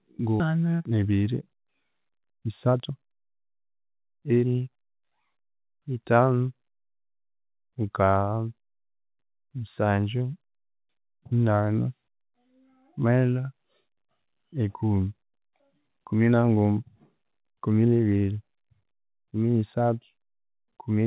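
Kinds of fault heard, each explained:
Skip ahead: At 0.40 s the speech jumps forward with no gap, because about a second of audio was dropped and the two sides were butted together. Unlike a dropout, there is no silence or filled-in sound. The speech simply lurches onward at an abrupt join, and the next syllable arrives too early. This is distinct from the steady hurrying that follows, since here a single large piece vanishes at once.
Jitter buffer speed-up: From 0.50 s to 4.92 s the speech runs at about 111% of normal pace while its pitch stays put. The receiver, holding more audio than it wanted, trimmed tiny pitch-period slices again and again, removing roughly half a second in total. Unlike the skip ahead, nothing audibly disappears. It sounds hurried, and unlike a sped-up recording, the voice doesn't rise in pitch. The narrow 4 kHz band of the G.711 call path runs throughout.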